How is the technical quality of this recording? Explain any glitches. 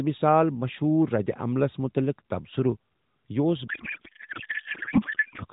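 From 3.68 s to 5.44 s the speech gives way to garbled noise and warble that barely tracks it. It sounds throughout like narrowband mobile audio, with nothing above 4 kHz, consistent with AMR-NB at about its 12.2 kbps mode.

That stretch is a codec payload misread. The frames point to octet-aligned AMR being unpacked as bandwidth-efficient, so the decoder takes every bit field from the wrong position and synthesises nonsense until 5.44 s.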